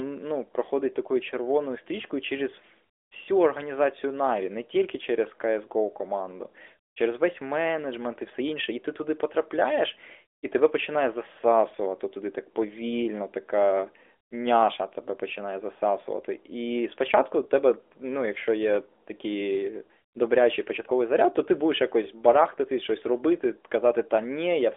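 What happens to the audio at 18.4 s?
At 18.4 s the speech carries on intact, with nothing breaking into it beyond the steady narrowband mobile-codec sound, capped at about 3.7 kHz, that runs through the whole clip.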